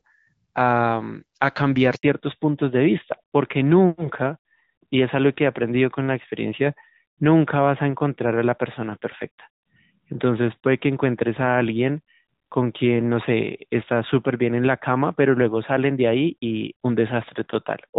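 Speech that opens in HD Voice, with light codec smoothing consistent with AMR-WB around 12.65 kbit/s, then hits a handover gap: from 1.95 to 2.03 s the signal drops out for about 80 ms while the call switches networks and no frames arrive. Right after, at 2.03 s, there's a fallback to narrowband through to the end. Everything above 4 kHz disappears, so the speech sounds duller and rougher, pointing to a drop to AMR-NB at 12.2 kbit/s.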